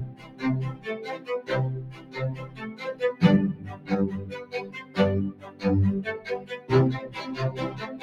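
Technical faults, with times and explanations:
Throughout, noise suppressor applied to music or sounds: a speech-tuned suppressor stays active and treats steady tones and tails as noise, so gain swings by roughly 15 dB, causing pumping and thinning.
0.08–0.43 s, 1.93–2.15 s, 2.47–2.81 s, 3.56–3.9 s, 5.33–5.63 s and 6.41–6.7 s, sound cut by the noise suppressor: the suppressor misjudges these passages as noise and pulls them down by about 10 dB (about 8 dB at 2.47 s and 6.41 s), so sustained parts sink and decays end early.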